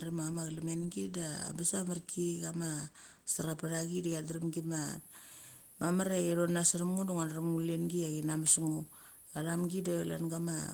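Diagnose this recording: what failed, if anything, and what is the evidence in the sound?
The codec stage failed, with Opus voice compression throughout the speech. Below 8 kHz the linear-prediction layer sounds hoarse and faintly robotic, while the sparse coding above it reaches up to 20.1 kHz. This fits hybrid coding near 16 kbps rather than band-limiting, which would remove the top instead.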